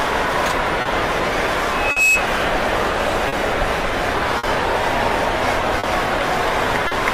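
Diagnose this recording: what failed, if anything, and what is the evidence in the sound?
Network timing: a clock drift between sender and receiver, with the sender running roughly 4% slow, so the jitter buffer keeps draining and timing hiccups recur throughout.

Also network: short stalls from late packets at 0.81, 1.91, 3.28, 4.38, 5.79 and 6.87 s, each holding the sound 40 to 50 ms, with nothing lost.

Acoustic path: a loudspeaker feedback squeal from 1.71 to 2.29 s, a 2.6 kHz tone swelling over about a third of a second to roughly 5 dB above the signal.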